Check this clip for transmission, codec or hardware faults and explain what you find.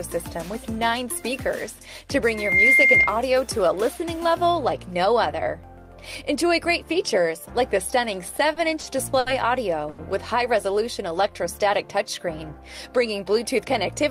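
Four faults stand out: one acoustic and three from the network receiver.

From 2.31 to 3.17 s there is a loudspeaker feedback squeal. A microphone is hearing its own loudspeaker, and at 2.1 kHz the loop gain tops one. The tone swells over about a third of a second to roughly 10 dB above the sound.

Between 8.27 and 9.29 s the audio stutters through repeated stalls. Packets arrived late again and again, draining the jitter buffer five times. The receiver held the last sound, about 150 ms in all, longest 70 ms. Nothing is lost, but the passage drags.

At 9.90 s a short stall from a late packet follows. One packet missed its slot, so the receiver stretched the last sound for 80 ms and resumed where it left off. The delay grows by 80 ms, and the sound briefly hangs.

From 10.73 to 11.64 s comes a jitter buffer slow-down. To rebuild its reserve, the receiver repeated tiny fragments, adding 43 ms. 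Playback runs at 96% speed with the pitch unchanged. The sound seems faintly drawn out.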